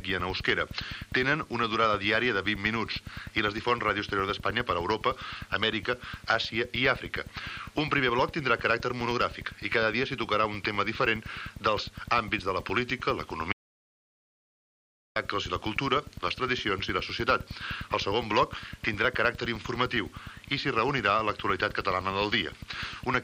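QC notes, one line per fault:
13.53–15.16 s, audio dropout to silence: the sound cuts off mid-flow and returns about 1.63 s later, with the gap silent and no room tone, likely because the input link or device dropped while recording continued. Material in that span is lost.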